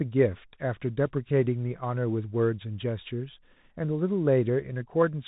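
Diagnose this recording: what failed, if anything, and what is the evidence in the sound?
Across the whole 5-second recording the speech sounds narrow and muffled, with nothing above about 3.8 kHz, a scratchy edge on sibilants and a granular hiss underneath. This is the Bluetooth CVSD headset codec. Its one-bit adaptive-step coding, which fits a 64 kbps link, cannot track fast, loud changes.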